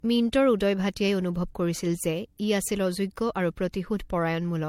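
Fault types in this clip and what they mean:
Generation loss: the speech sounds swirly, hollow and smeared, with blurred consonant attacks and nothing above 16.5 kHz, likely from about four successive MP3 encodes at roughly 64 kbit/s. A single encode at that rate would sound far less watery and smeared.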